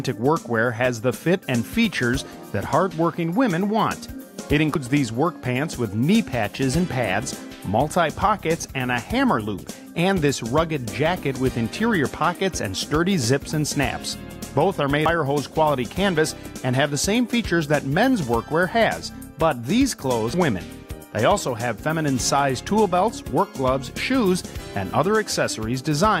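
Damaged data in a compressed stream made the decoder misread frames and resync, leaving brief glitches in the audio at 4.75, 15.06 and 20.34 s.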